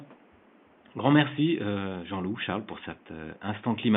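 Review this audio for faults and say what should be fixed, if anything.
Nothing here needs fixing, as the speech signal is intact and the only other sound is the room's own background noise, about 31 dB below the speech.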